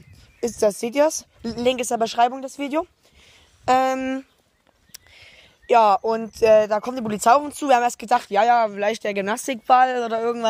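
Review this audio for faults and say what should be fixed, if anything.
Nothing needs fixing, since the signal shows no audible technical fault anywhere in the recording.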